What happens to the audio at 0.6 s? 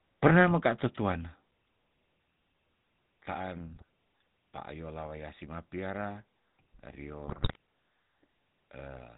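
The speech at 0.6 s sounds buzzy and gravelly, with nothing above 4 kHz. That is GSM full-rate codec damage, present across the whole clip and consistent with a 13 kbps link. The codec models the vocal tract and drives it with sparse, regularly spaced pulses, which produces that coarse, band-limited roughness.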